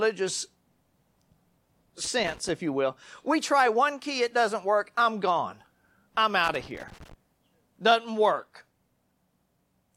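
A worn or dirty contact somewhere in the signal path is making and breaking as it shifts, so this speech recording carries loose connector crackle: irregular scratchy bursts from 2.05 to 2.49 s, ending just before "if you will we", and from 6.44 to 7.13 s, right after "work I'm gone I'm".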